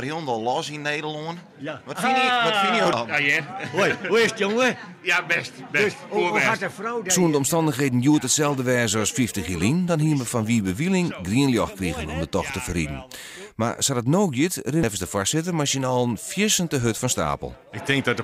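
Two brief blips at 2.93 s and 14.83 s are damaged data in a compressed stream: the corrupted frames break decoder sync, leaving thin vertical broadband streaks on a spectrogram.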